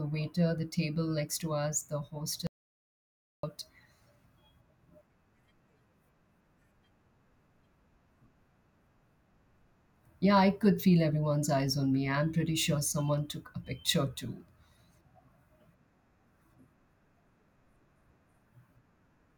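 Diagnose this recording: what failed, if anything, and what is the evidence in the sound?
Audio dropout to silence from 2.47 to 3.43 s. Speech cuts to silence with no room tone. Likely input loss upstream; 0.97 s is gone.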